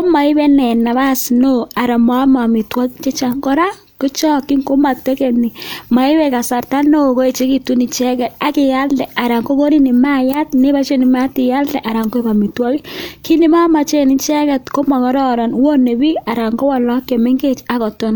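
There are no technical faults in the audio to describe, so there is nothing to place in time order.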